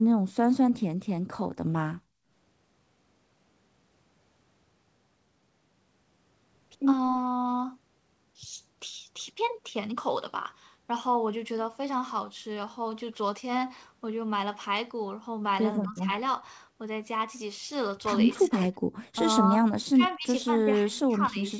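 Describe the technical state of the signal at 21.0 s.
Speech suppressed in double talk runs from 20.56 to 21.41 s. The speech dips by up to about 20 dB over most of that span, likely because the echo canceller mistook it for loudspeaker echo during overlapping talk and attenuated it.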